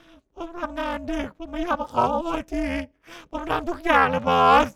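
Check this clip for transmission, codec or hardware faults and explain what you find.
One fault runs through the whole speech clip: overlap-add ripple. The frames were resynthesised with windows whose overlap does not sum to constant gain, so level dips by about 60 dB once per frame, around 300 times a second, giving a metallic buzz with extra tones around each note.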